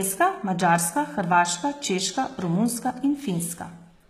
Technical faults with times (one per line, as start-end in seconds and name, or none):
0.00-4.09 HE-AAC compression